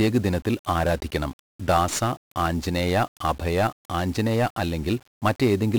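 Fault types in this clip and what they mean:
1-bit DFPWM compression: the speech sounds fuzzy and crackly from start to finish, with the upper frequencies sunk under a dense hiss. Each sample keeps a single bit that nudges a running level up or down, so the coarse steps spread heavy broadband noise across the whole clip, consistent with a rate near 48 kbps.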